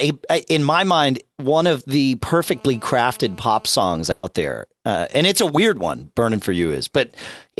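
A speech recording carries two faults. From 2.46 to 3.69 s, just after "mind one of the", a hard, raspy buzz at 217 Hz sits about 29 dB below the speech. It is nearly steady and rich in harmonics. This is GSM phone buzz: a nearby 2G phone in a call transmits 217 bursts per second, and the audio circuitry rectifies those radio pulses into sound. From 4.11 to 4.26 s, the preceding sound is held and fades before the speech jumps ahead to "there uh and it's". This is a burst of packet loss: about 120 ms of audio never arrived in time, and the receiver stretched and faded the last sound to cover the gap, so that stretch of speech is gone.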